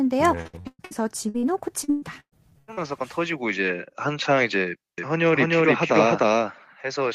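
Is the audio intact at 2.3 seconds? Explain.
No. The moment at 2.3 seconds sits inside a burst of repeated packet loss (robotic sound) running from 1.84 to 2.89 s. Six short holes open in this stretch, the longest about 120 ms. Each is patched by extending the preceding sound, so roughly 44% of the span is concealment rather than real speech. The result at 2.3 s is choppy speech with pieces missing.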